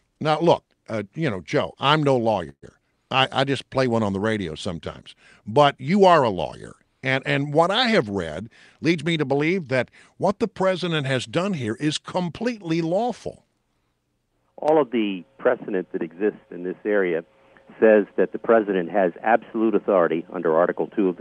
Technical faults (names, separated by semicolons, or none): call audio freeze; jitter buffer speed-up